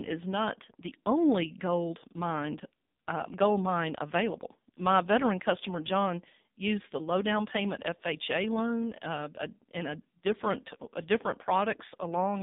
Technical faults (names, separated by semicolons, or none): AMR narrowband mobile codec